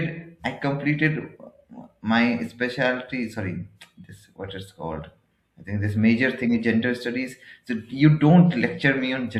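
A speech clip with one short burst of chirpy, squeaky noise from 6.46 to 6.51 s, peaking somewhere around -25 dBFS. This is a corrupt frame decoded: flipped bits in what sounds like a couple of compressed frames were played anyway, misplacing energy in frequency.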